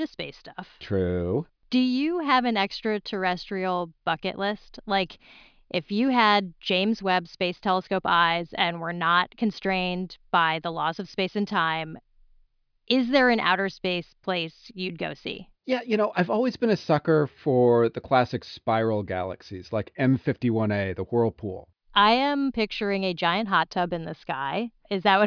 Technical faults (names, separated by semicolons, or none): none